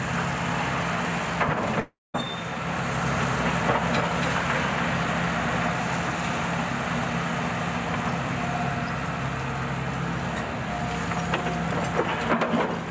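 From 1.80 s to 2.16 s the sound breaks off. A buzzy continuation of the last sound fades out, and the final 0.18 s is near-silent. This is likely a long network dropout. About 0.34 s of audio never arrives, and the sound resumes past the gap.

From 2.94 s to 5.72 s a second copy of the same sound runs underneath. It trails by roughly 0.3 s and sits about 5 dB lower. It is dry and full-band, and it starts and stops abruptly. This is likely a doubled audio track, from a second, slower capture path. On the call path, nothing is heard above 8 kHz.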